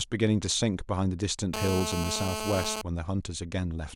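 GSM phone buzz runs from 1.54 to 2.82 s, laid over the speech. A 2G phone on a call nearby was transmitting in bursts at 216.7 Hz, and the audio circuitry rectified those radio pulses into the signal path. The result is a hard, raspy buzz at that rate, rich in harmonics and unrelated to the speech. Because the phone was on a call, the buzz holds steady throughout, sitting only about 4 dB below the speech.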